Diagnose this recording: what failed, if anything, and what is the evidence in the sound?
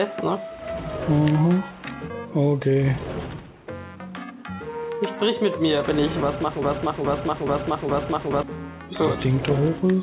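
Network and jitter buffer: a skip ahead at 2.10 s. About a second of audio is missing, and the two sides of the jump are butted together with no fill. Audio that arrived late was discarded as newer audio was already queued, so playback latency dropped by roughly a second.

Jitter buffer: a jitter buffer speed-up from 2.16 to 5.35 s. The audio runs at about 112% speed with unchanged pitch and sounds hurried. The buffer was over its target depth and trimmed short pitch-period segments repeatedly, removing roughly 0.4 s in total.

Playback or stream: a broken-record loop from 6.62 to 8.43 s. A 0.42 s fragment repeats exactly four times back to back, and the audio due in that span never plays. The likely cause is a stalled player or stream re-sending its last held fragment. All of this sits inside a call-codec band limited to 4 kHz, consistent with G.711 mu-law.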